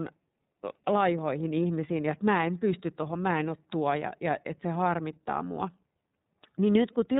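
A speech clip passed through the iLBC codec for its whole length, and the coding damage is plainly audible. The speech stays intelligible but sounds rough and slightly synthetic, with a narrowband, telephone-like quality. On a spectrogram, all energy stops abruptly at 4 kHz. The harmonics below look smeared and blocky, with the texture changing at short, regular steps. This fits 30 ms frames, each coded on its own, at a rate consistent with the 13.33 kbps mode.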